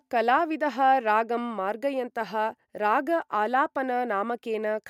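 A short speech recording, with nothing technically wrong with it.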